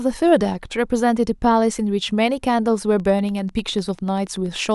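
Likely interference injects a train of clicks from 3.00 to 4.67 s, some twenty regular ticks at 10.2 a second, about as loud as the speech.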